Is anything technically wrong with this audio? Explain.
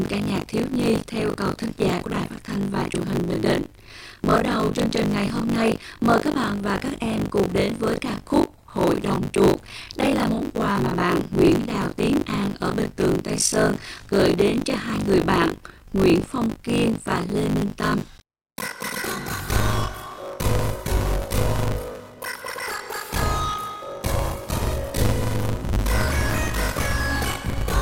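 Yes. Buffer tearing runs throughout the clip. The writing program and the playback hardware have slipped, so they cross inside every period. Roughly two-fifths of each buffer holds sound from about 40 ms earlier. The hard joins give a steady 50 Hz robotic buzz, pointing to a 20 ms period, whenever sound is playing.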